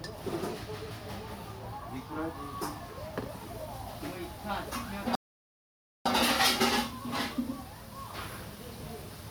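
At 5.15 s the sound cuts out in mid-flow and stays silent until 6.06 s, a gap of about 0.9 s, before playback resumes. This is a playback stall, most likely the player's buffer running dry or its output thread being blocked.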